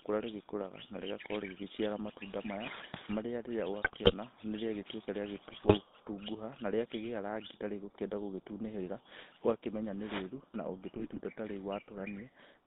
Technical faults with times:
0.00-12.66 GSM full-rate codec
3.82-4.13 GSM bit errors
5.48-5.77 GSM bit errors
10.96-11.19 GSM bit errors

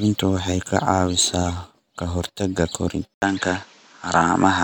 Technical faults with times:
3.14-4.64 input switched to a poorer device

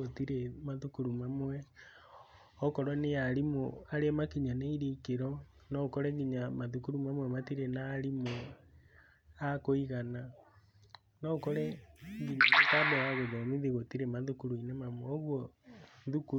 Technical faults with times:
none

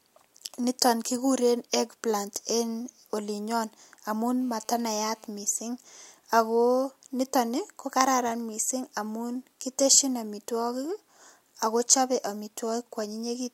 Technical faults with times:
4.40-5.27 GSM phone buzz

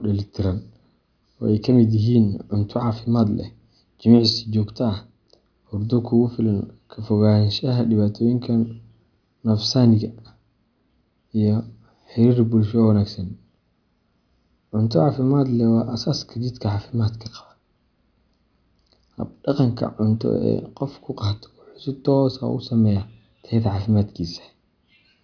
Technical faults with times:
none

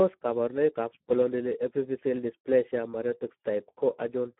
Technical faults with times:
0.00-4.39 Speex codec

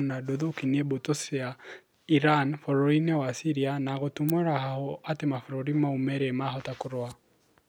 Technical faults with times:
4.29 electrical switching spike

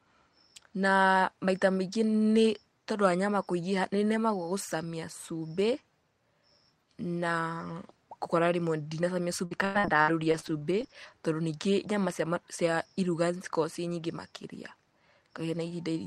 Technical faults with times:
9.45-10.95 repeated packet loss (robotic sound)

